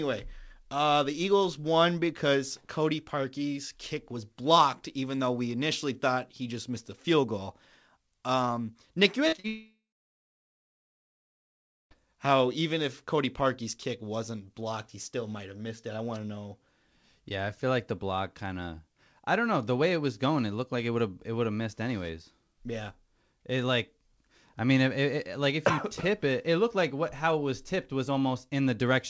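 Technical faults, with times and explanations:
9.28, 9.36 and 9.40 s, short concealed packet loss: roughly 20 to 40 ms of packets arrived too late, so the receiver extended the preceding sound, leaving brief smears and wobbles in quick succession.
9.48 to 11.93 s, long network dropout: audio stopped arriving for about 2.4 s, likely a network outage; the continued sound fades within tenths of a second, about 2.1 s of silence follows, and speech resumes at "how even if" with the middle missing.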